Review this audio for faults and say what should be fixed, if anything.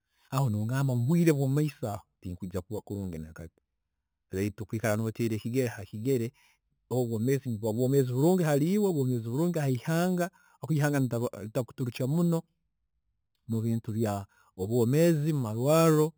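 A bright, metallic fizz rides on top of the speech for the whole clip, rising and falling with the voice's loudness, and its lowest layer moves opposite to the pitch. This is imaging from sample-and-hold upsampling: the audio was raised from 8 kHz to 48 kHz by repeating each sample without a smoothing filter, so mirrored copies of the spectrum sit above the original band, the first filling 4 to 8 kHz at about 21 dB below the speech. To prevent it, upsample with a proper interpolating low-pass filter that removes everything above 4 kHz.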